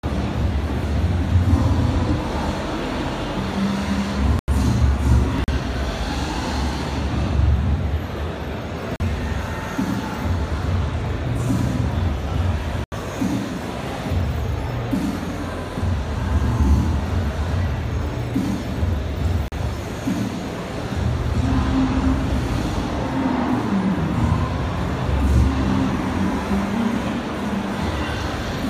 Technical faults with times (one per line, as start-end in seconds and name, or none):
4.39-4.48 block of digital silence
5.44-5.48 block of digital silence
8.96-9.00 block of digital silence
12.84-12.92 block of digital silence
19.48-19.52 block of digital silence